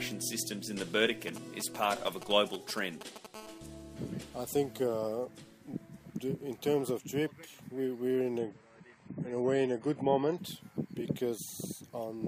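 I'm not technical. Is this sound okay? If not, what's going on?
No, there are three problems.

From 1.28 to 3.26 s you can hear GSM signalling bursts. An older 2G mobile phone nearby is sending short radio bursts, and the audio equipment picks them up. That comes through as a galloping dit-dit-dit of short buzzes, fairly loud against the sound.

Right after, from 3.34 to 4.71 s, comes GSM phone buzz. It's a 2G phone nearby, now on a call, sending bursts about 217 times a second. The result is a steady, raspy buzz that has nothing to do with the actual sound, though it's quieter than the galloping buzzes before it.

From 8.38 to 10.38 s it's an adaptive stream at a lower bitrate. The connection slowed, so the player switched to a lower-quality version for those two seconds. The change is sudden but there's no gap. The sound turns dull, losing everything above about 10 kHz, and picks up some harsh digital artefacts.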